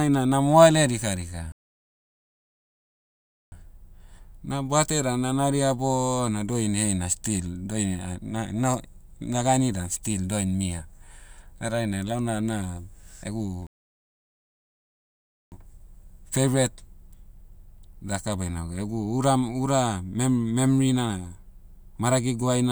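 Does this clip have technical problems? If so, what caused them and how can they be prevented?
Yes. Two playback stalls cut the speech dead, from 1.52 to 3.52 s and from 13.67 to 15.52 s, silences of about 2.0 and 1.85 s. Gaps this long set them apart from a brief dropout. The likely cause is the player starving for data or its thread being blocked. Deeper buffering and a higher-priority audio thread prevent this.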